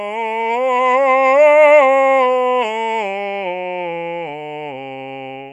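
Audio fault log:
No faults heard in this music clip.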